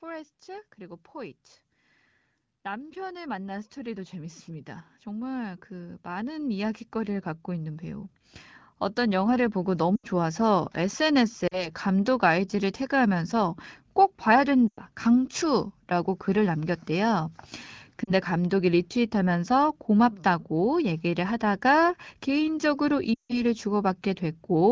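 From 0.05 s to 10.4 s an automatic gain rising fault is audible: the gain control judged the input too quiet and kept turning it up, about 18 dB in all, so the speech and the background noise swell together. On a waveform the envelope widens steadily across those ten seconds. On a spectrogram the whole band, including the noise floor between phrases, brightens gradually rather than in steps.

Lost AMR speech frames follow at 9.96 to 10.06 s, 11.47 to 11.69 s, 14.68 to 14.81 s, 18.03 to 18.13 s, and 23.14 to 23.43 s. Each gap is 40 to 160 ms, which fits runs of two to eight 20 ms frames that failed their checksum after radio errors. The wideband decoder repeats the last good pitch and vocal tract settings at falling gain, so each gap sounds like a short smeared warble that quickly fades, with the speech briefly rough when it resumes. A spectrogram shows frozen, smeared harmonics that darken toward silence, and the waveform dips to a trough at each point.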